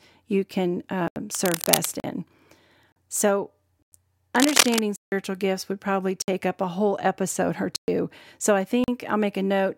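It's a speech clip with two problems. The first is a run of blocks of digital silence. The audio drops straight to silence with no fade and comes back the same way. They fall at 1.08 to 1.16 s (80 ms), 2.00 to 2.04 s (40 ms), 2.92 to 2.96 s (40 ms), 3.82 to 3.92 s (about 96 ms), 4.96 to 5.12 s (160 ms), 6.22 to 6.28 s (about 58 ms), 7.76 to 7.88 s (120 ms) and 8.84 to 8.88 s (40 ms). The shortest ones sound like short holes, and the longer ones are clear holes. That's the pattern you get when whatever feeds the output doesn't fill its buffer in time and a block of zeros goes out instead. The second problem is cable scratch noise: dense, uneven bursts of scratching over the speech from 1.35 to 1.88 s, a bit below the speech level, and again from 4.36 to 4.82 s, about as loud as the speech itself. That rustle most likely comes from a worn cable, connector or control being moved, with its contact resistance jumping around as it shifts.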